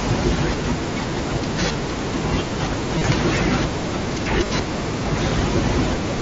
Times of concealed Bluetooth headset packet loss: 1.72-1.75, 2.98-3.01, 4.44-4.50

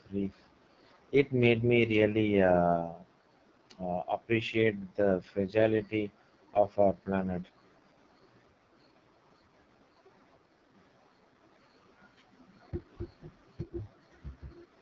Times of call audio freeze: none

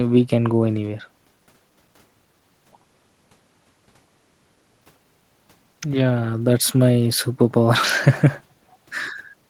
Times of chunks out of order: none

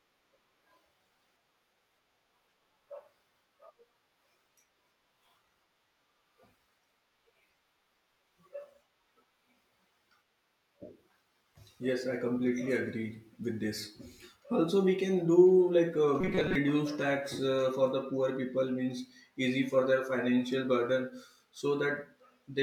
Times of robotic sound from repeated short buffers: 16.21-16.55

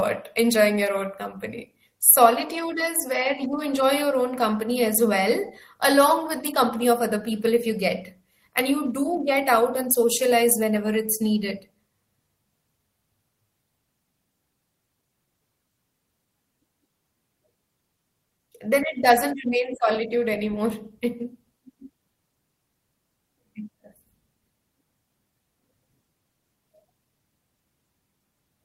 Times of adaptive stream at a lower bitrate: none

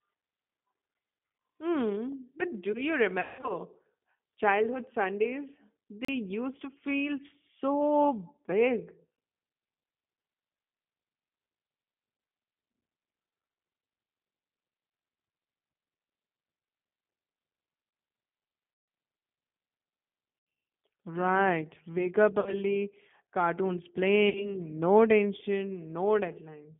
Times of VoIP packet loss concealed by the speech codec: 3.21-3.53, 18.74-18.88, 20.39-20.47, 22.40-22.55, 24.29-24.55

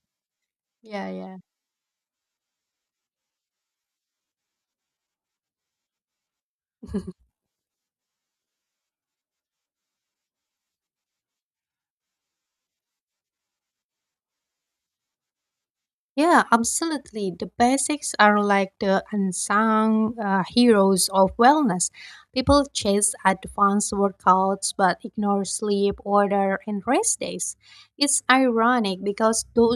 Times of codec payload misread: none

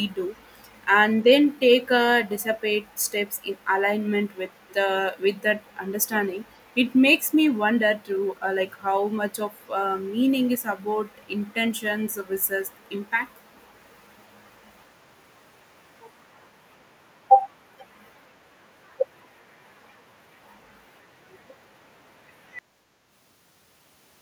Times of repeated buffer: none

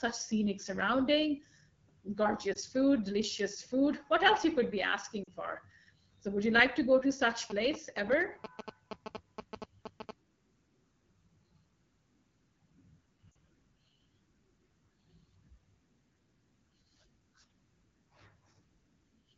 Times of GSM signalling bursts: 7.50-10.11

